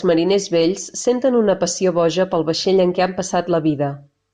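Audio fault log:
Nothing to log here; listening through this bit of speech turns up no faults at all.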